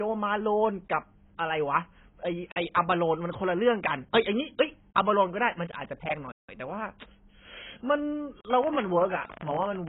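Speech, and it sounds badly squeezed all the way through: nothing comes through above about 3.9 kHz, so it's dull and boxy, and what's left has that smeared, warbly texture with fizzy sibilants. That's most likely AAC compression pushed hard, AAC-LC at a very low rate, and the damage fits a bitrate around 16 kbps, where the encoder drops the top end and starves the remaining bands of bits. Then from 8.64 s to the end at 9.89 s there's a train of clicks, about 17.5 a second at an uneven pace, all much the same shape and peaking a few dB above the speech. It ticks over everything, pauses included, the kind of pattern you'd likely get from nearby equipment interfering or a faulty connection or power supply.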